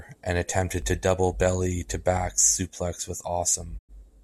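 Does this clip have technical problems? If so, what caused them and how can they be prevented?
Yes. DC step at 0.82 s: the waveform's zero line suddenly shifts and then drains away through a roughly 2 Hz high-pass, giving a brief low thump under the speech. Keeping offset-free inputs and avoiding converter recalibration or source switching while recording prevents it.

Digital broadcast dropout from 3.77 to 3.91 s: the receiver muted after losing good frames, fading out over 20 ms and dropping about 96 ms of audio, which fits three corrupted frames. A stronger, more stable reception path with better error protection prevents it.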